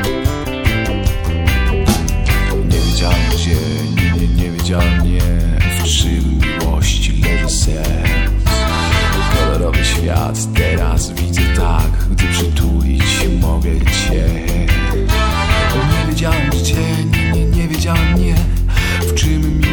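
Overlapping chunks cause a short stutter at 3.72, 8.77, 13.82 and 18.87 s. The audio was handled in 5-second chunks, and each one began before the previous one ended. About 50 ms plays twice at every join, giving a regular click.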